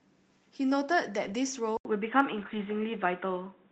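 Lost packet rebuilt from error correction, 1.23 to 1.33 s: a few packets went missing, and the decoder filled about 60 ms from the lower-bitrate copies carried in the following packets. There is no gap, but that stretch sounds rougher and noisier than the speech around it.

Input switched to a poorer device, from 1.77 s to the end: after a silence of about 80 ms, the speech turns dull and boxy, with nothing above 3.8 kHz. The level shifts noticeably and a faint new background noise appears. This is likely a change to another microphone or a headset's call profile.

Lost packet rebuilt from error correction, 2.37 to 2.59 s: a longer run of losses, about 120 ms, is again covered by the redundant copies. The speech continues without a break but sounds coarse and noisy through that span.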